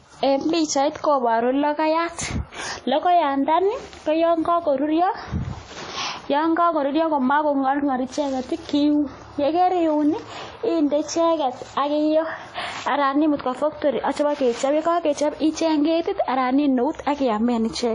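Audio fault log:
Throughout: likely WMA compression. The speech rings and sounds washy, with breathing hiss. Long transform blocks smear noise, which fits roughly 32 kbps.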